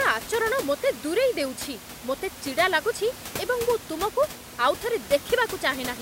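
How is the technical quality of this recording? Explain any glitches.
No technical faults are audible.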